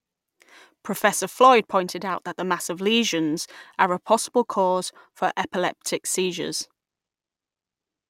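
From start to finish the speech carries sample clock jitter: the converter's timing wanders by around 1.5 microseconds, so each sample lands slightly off its proper instant. Steep, fast-changing parts of the waveform suffer most, leaving a grainy hiss that swells on loud, bright syllables and disappears in pauses. On a spectrogram this shows as a faint noise haze, roughly 35 dB below the signal, spreading above strong high-frequency energy and absent between phrases.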